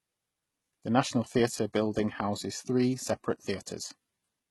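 Throughout, s sounds turn gritty and lispy with metallic treble, likely HE-AAC compression at a low bitrate; spectrograms show blocky, repeated high bands above a crossover.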